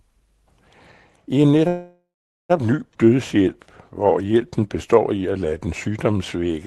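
Right after "I en", from 1.67 to 2.51 s, a call audio freeze holds the sound for 0.82 s. The last sound is stretched into a fading buzz that ends in 430 ms of silence, and then the audio resumes where it stopped. This is likely packets arriving late and the jitter buffer running empty.

At 2.93 to 2.97 s a skip ahead drops about 0.4 s of audio. The sound jumps forward with only an 11 ms join.

Jitter buffer slow-down follows from 3.05 to 3.48 s, adding 51 ms, and again from 4.02 to 6.53 s, adding 271 ms. Both play at 90% speed with the pitch unchanged. Repeated pitch periods draw the sounds out as the buffer rebuilds its reserve, all over the call codec's band limit near 12 kHz.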